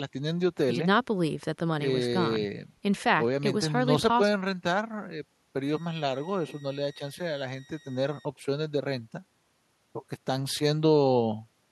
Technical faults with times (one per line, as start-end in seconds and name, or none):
5.69-8.25 switching supply whistle